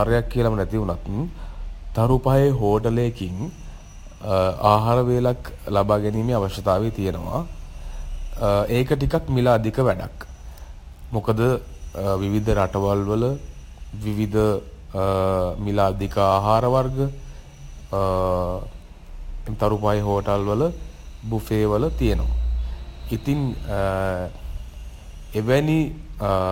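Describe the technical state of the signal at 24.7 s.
At 24.7 s the speech carries crude rate conversion, present across the whole clip rather than just this point. Samples appear to have been picked by nearest neighbour instead of being filtered, which fits a 48 kHz to 44.1 kHz change. The dropped samples form a recurring error pattern, sitting around 35 dB below the signal, that adds inharmonic tones. It is heard as a gritty fizz riding on louder and brighter moments of speech.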